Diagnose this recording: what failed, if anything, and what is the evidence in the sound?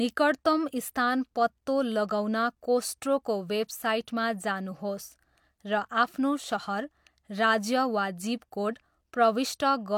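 Nothing failed, and the sound gives no evidence of a fault at any stage of the recording chain.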